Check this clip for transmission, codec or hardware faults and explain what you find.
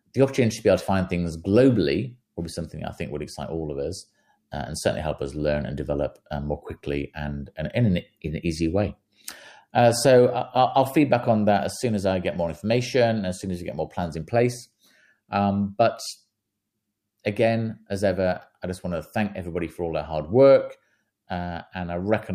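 No technical fault can be heard in the speech, and the signal stays steady and intact throughout.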